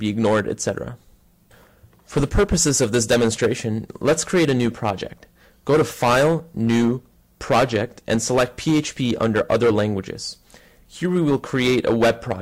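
Hard clipping runs through the whole clip: the signal was pushed about 8 dB beyond what some stage could pass, so every peak is sheared flat, with roughly one sample in twenty clipped. The loud moments carry a harsh, gritty fuzz. On a waveform the peaks appear as squared-off plateaus. A spectrogram shows bright vertical smears of added harmonics reaching well into the upper kilohertz at each loud onset.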